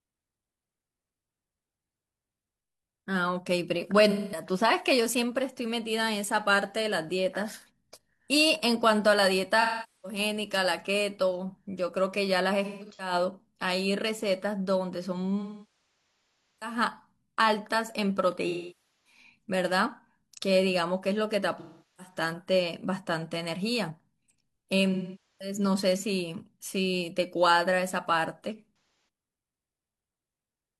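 AAC frame loss with concealment hits this speech at 4.1, 9.6, 12.6, 15.4, 18.5, 21.6, 24.9 and 28.7 s. The decoder papers over missing chunks by reusing the last good spectrum, giving smeared, phasey patches, and the 1.2 s gap at 15.4 s sags toward silence.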